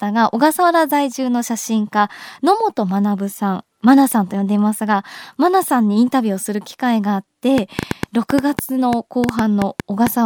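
A train of clicks runs from 7.58 s to 10.08 s in this speech recording: about fifteen similar pulses at roughly 5.6 per second, unevenly spaced and standing well above the speech, audible in pauses too, likely from electrical interference or a faulty connection or power supply.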